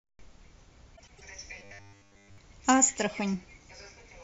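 From 0.96 to 1.21 s, frames out of order: two adjacent blocks of about 104.5 ms swap places and decode in that sequence, giving a garbled flutter. Unlike a dropout, nothing is missing; the sound is merely rearranged.

From 1.59 to 2.38 s, the speech turns into a rigid, metallic 100 Hz buzz that roughly tracks the syllables. This is robotic sound from repeated short buffers, likely from audio arriving too seldom, with essentially all of it replaced by repeated 10 ms slices. The fixed pitch separates it from ordinary codec warble.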